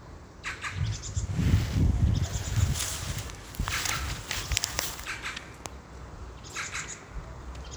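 Nothing goes wrong anywhere in this recording; there's no technical fault to point to at any moment.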